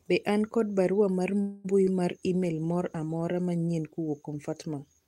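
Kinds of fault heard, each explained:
Call audio freeze: From 1.41 to 1.66 s the sound stalls and the last sound stretches on as a fading buzz. This is likely late packets draining the jitter buffer. About 230 ms is filled in, nothing is lost, and everything after arrives 230 ms later.
Short concealed packet loss: Around 1.84 to 1.89 s a brief smear interrupts the speech. About 20 ms of audio never reached the decoder in time. The receiver continued the preceding sound for roughly 24 ms, then blended back into the real signal.
Call bitrate drop: From 2.27 to 3.35 s the speech turns rougher and duller. The bandwidth estimate fell, so the encoder cut from 32 to 17 kbps. It stayed at that lowest rate for about 1.01 s before recovering.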